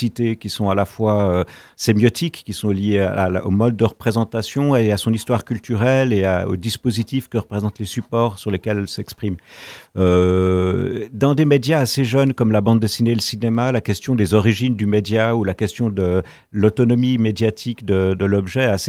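No technical faults are audible anywhere in the recording.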